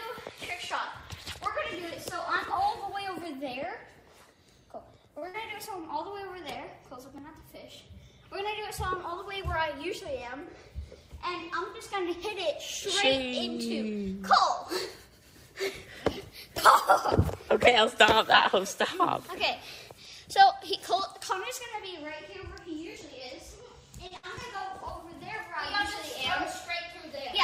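At 5.19 s a short stall from a late packet holds the sound for about 30 ms while the jitter buffer runs dry, and it recurs at 24.07 s for about 35 ms. Nothing is lost in either case; the sound is stretched and then resumes in place. Each stall is followed immediately by a burst of packet loss, from 5.28 to 5.37 s and from 24.17 to 24.26 s. Around 60 ms is concealed with a fading continuation of the last sound, and the audio then picks up further on. Small forward jumps occur at 7.18, 16.58, 22.96 and 24.37 s. These are likely a dropped buffer (overrun), with the skipped span ranging from roughly 10 to 40 ms and no silence in the gap.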